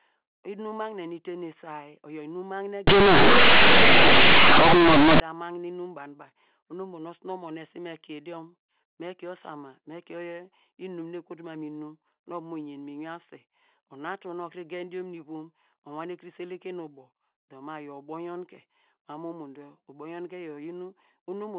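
From 2.87 s to 5.20 s, just after "isay oyor inum magne", the speech turns into harsh, very loud buzzing. This is companded audio read as linear. The stream here is mu-law G.711, but its bytes are played as plain 8-bit samples without expansion. Every sign change throws the output across about half its range. Quiet parts come out as loud as peaks, and pauses fill with heavy noise. Clean telephone-band sound returns at "ta magne inum banu".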